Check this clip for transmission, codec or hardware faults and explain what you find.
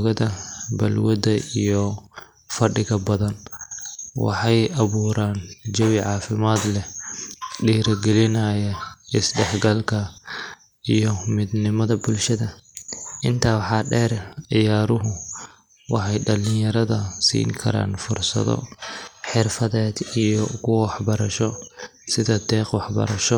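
There's one fault here, a drift correction step, hitting three times: 11.88–14.19 s, 15.31–15.99 s and 19.23–20.23 s. The speech jumps about 5.8% faster and nearly a semitone sharp, then snaps back, likely clock-matching software bumping playback rate to manage its buffer.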